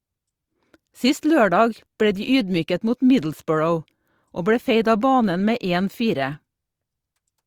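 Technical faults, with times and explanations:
1.21–1.23 s, pre-echo: just before "lørdag ble de ydmyket" a short hiss rises for about 23 ms ahead of the sharp onset, so the attack arrives softened and smeared instead of crisp. The codec coded that stretch as one transform block and spread its quantisation noise across all of it. The noise level suited to the loud attack late in the block therefore also landed in the quiet moment before it, where nothing masks it.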